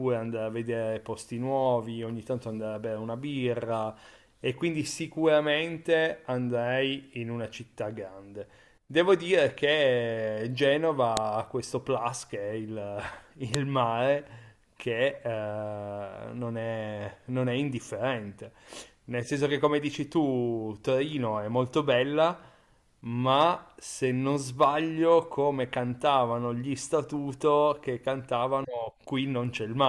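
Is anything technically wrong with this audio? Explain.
Yes. There are two sharp, loud clicks in this speech, at 11.17 s and 13.54 s. This is a file header played as audio. Separately saved WAV pieces were joined with their headers left in. Those header bytes play as raw samples, giving a brief snap at each join.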